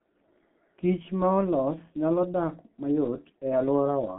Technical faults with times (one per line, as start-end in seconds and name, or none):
0.00-4.18 G.723.1 codec